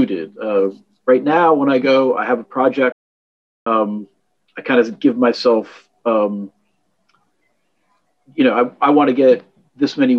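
At 2.92 s the sound cuts out mid-flow and stays silent for about 0.74 s, resuming at 3.67 s: a playback stall, likely from the player running out of data or its thread being blocked. Unlike a dropout, the gap is long.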